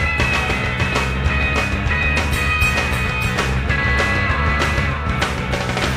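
Throughout, a doubled audio track: a second full-band copy trails about 0.7 s behind, a few dB quieter, likely from an out-of-step duplicate, with no decay or room colour, unlike echo.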